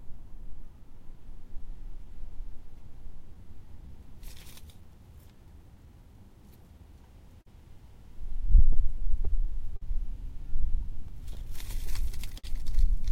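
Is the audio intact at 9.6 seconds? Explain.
No, not quite. The whole clip carries clock drift between sender and receiver: the sender's clock runs roughly 4 percent slow against the receiver's, so the jitter buffer keeps draining and the playback can't hold a perfectly steady pace, giving small, unevenly spaced timing hiccups.

That drift drives repeated timing corrections from 0.10 to 11.36 s, right across 9.6 s. The receiver keeps stretching the audio by repeating short slices, running at about 98 percent speed and adding roughly 300 ms overall.

Sitting right on 9.6 s is a burst of repeated stalls (stutter), from 8.73 to 9.82 s. The buffer ran dry five times there, and the receiver carried the last sound forward, with 89 ms filled in total and the longest stall 50 ms. Nothing is actually lost, but about 8 percent of that stretch is patched, so it drags and stutters.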